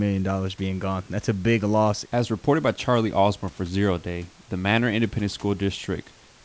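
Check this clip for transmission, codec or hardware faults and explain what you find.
No transmission, codec or hardware faults can be heard in the speech. The call path's codec, whose band fits G.722 at 64 kbps, leaves nothing above 8 kHz, and the room noise sits about 32 dB below the speech.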